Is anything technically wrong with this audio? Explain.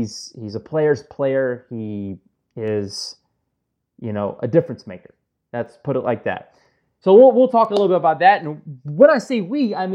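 Yes. There are word clock ticks running through the speech, starting at about 0.68 s and continuing to 9.64 s, roughly one a second, so around ten in all. It sounds like a digital link read by a receiver on its own free-running clock, off by something like 20 ppm. Each time the two clocks slip a full sample, a single sample gets dropped or repeated, and you hear a sharp, steady-rate tick.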